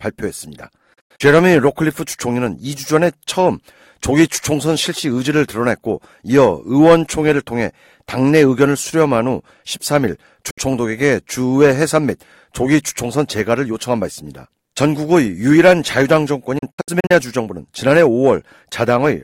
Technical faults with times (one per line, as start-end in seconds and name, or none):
0.93-1.21 digital broadcast dropout
10.50-10.58 digital broadcast dropout
16.58-17.11 digital broadcast dropout